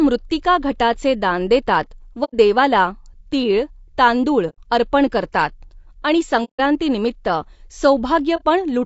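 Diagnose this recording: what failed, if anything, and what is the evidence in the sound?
Codec stage: the speech sounds rough and grainy throughout, with noise between the harmonics and a thin, synthetic top band. The likely cause is low-delay AAC compression (AAC-ELD) at roughly 32 kbps. Its short frames resolve pitch harmonics poorly, leaving too few bits for clean detail.

Transmission into the decoder: soft-edged dropouts occur at 2.24–2.34 s, 4.49–4.58 s, 6.44–6.60 s and 8.36–8.42 s. This is AAC frame loss with muting. The decoder zeroes each missing frame's spectrum, and overlapping windows fade the audio out and back in.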